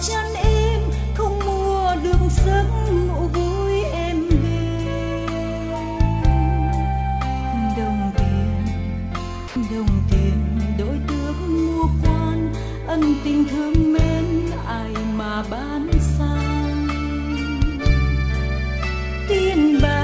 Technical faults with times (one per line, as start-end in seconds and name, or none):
9.48-9.56 sound dropped by the voice detector